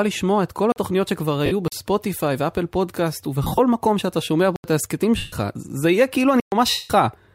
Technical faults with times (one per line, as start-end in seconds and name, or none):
0.72-0.76 block of digital silence
1.46-1.52 lost LE Audio frames
1.68-1.72 block of digital silence
3.43-3.59 lost LE Audio frames
4.56-4.64 block of digital silence
5.17-5.33 lost LE Audio frames
6.40-6.52 block of digital silence
6.70-6.90 lost LE Audio frames